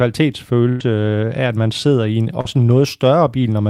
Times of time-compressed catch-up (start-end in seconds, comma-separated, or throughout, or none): none